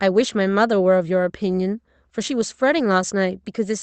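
Clock drift between sender and receiver runs through the whole recording. The sending device's clock is running fast, by around four percent, so audio arrives slightly quicker than the receiving end plays it out. The jitter buffer therefore creeps toward overflow, and the receiver has to keep discarding small pieces to hold latency down. On its own the drift isn't heard as a distinct event. It shows up as the pressure behind the corrections that follow.

Repeated timing corrections begin at about 0.49 s and continue to 3.81 s, the effective playback rate working out to 104 percent. All the edits go the same way: short slices of the speech are dropped at uneven intervals rather than repeated. Each cut is small, and if heard at all they come through as an unsteady tempo or faint hiccups where material goes missing. The audio passes through an Opus call codec with content extending to 8 kHz, at a bitrate of 40 kbps.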